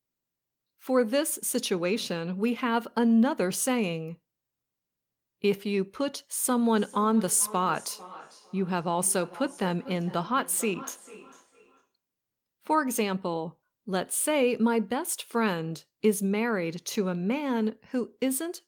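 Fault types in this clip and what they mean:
Feedback echo between two devices: another device replays the call into this microphone. From 6.77 to 11.92 s, repeats come roughly 400 ms apart, about 17 dB below the speech.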